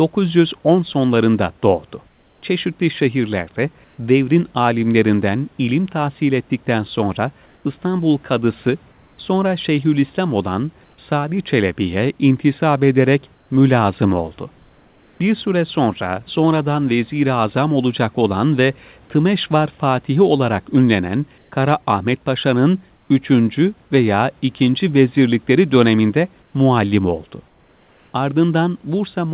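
In the pauses at 2.08–2.42, 3.84–3.98, 7.46–9.18, 10.84–10.98, 13.34–15.2, 21.38–21.52, 22.96–23.1 and 26.42–28.14 s, the room background turns into a smooth, featureless hiss, sometimes up to about 3 dB quieter. This is likely comfort noise in place of the background, synthesised by the receiver while the sender stopped transmitting during silence.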